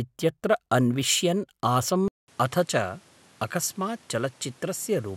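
Speech, where from 2.08 s to the end the sound turns duller after a 200 ms silence, with nothing above 13 kHz and a new noise floor roughly 30 dB down, likely an input switched to a poorer device. The gap and changed background mark a device change rather than a simple filter.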